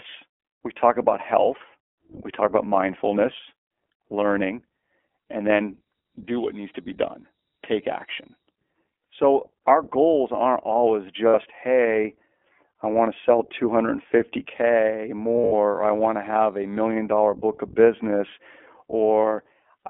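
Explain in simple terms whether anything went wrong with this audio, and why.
iLBC codec, throughout the clip: the speech went through a low-quality internet-calling codec. It keeps only a narrow band, roughly 250 Hz to 3.4 kHz, so the speech sounds thin, muffled and slightly rough and synthetic, with plainly audible coding damage.

Loudspeaker feedback squeal, 4.78 to 8.68 s, right after "talk about mindfulness learning": a microphone picked up the loudspeaker it was feeding, and the loop fed on itself. A single piercing tone near 3.8 kHz swells over about a second and a half until it is well above the speech.

Lost iLBC frames, at 11.28 to 11.35 s (60 ms, just after "our goals aren't always"), 15.36 to 15.53 s (120 ms of gaps over 160 ms, the longest about 70 ms) and 19.23 s: pieces of the signal were lost in transit. The decoder bridged each gap with a brief buzzy, held sound, then the speech resumed clearly almost at once.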